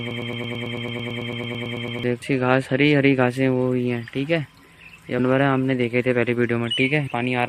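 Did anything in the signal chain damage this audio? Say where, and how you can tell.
Yes. The clip opens in a broken-record loop that is already running at 0 s and lasts until 2.03 s. A fragment of about 0.11 s repeats exactly, back to back, roughly 17 times before normal audio resumes. The stage was likely playback or stream buffering: a stalled player or stream kept re-sending the last chunk it held, so whatever should have played during those two seconds is gone.

Three short blips mark damaged data in the compressed stream, at the codec stage: at 2.21 s, at 5.18 s, and from 7.06 to 7.08 s. Each is brief, lasting under a few hundredths of a second. Corrupted or missing bytes made the decoder misread the affected frames and lose sync. It then searched for the next valid frame header.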